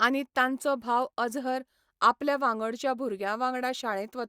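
No technical faults occur at any point in the speech.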